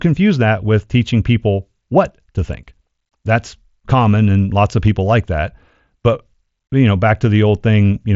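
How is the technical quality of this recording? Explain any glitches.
The technical quality is sound and there are no glitches to explain; the speech comes over a Bluetooth mSBC headset link whose bandwidth stops at about 7.7 kHz.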